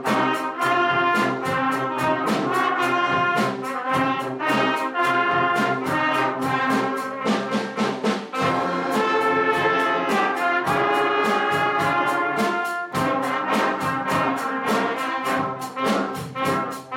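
No technical faults can be heard anywhere in the clip. Nothing in the audio stands out as a problem to point to at any moment.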